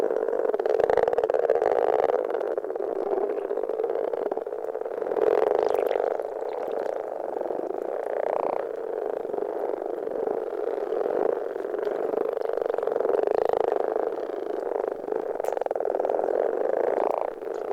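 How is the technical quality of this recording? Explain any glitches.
The main problem sits right at the start: a time-stretched section from 0.0 to 4.78 s. Over that stretch the audio runs at about 0.74 times its normal pace, yet the pitch doesn't drop with it. That's most likely software lengthening the passage to fill a slot, padding it out by repeating tiny slices rather than simply playing slower. You can hear it drag, and the pace jumps back to normal abruptly at 4.78 s.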